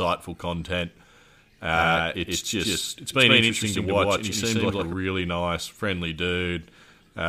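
A doubled audio track runs from 1.73 to 4.93 s, ending just before "nice friendly": a second, equally loud full-band copy trails by roughly 150 ms, most likely from a slower parallel capture path. It starts and stops abruptly, with no decay or room colour.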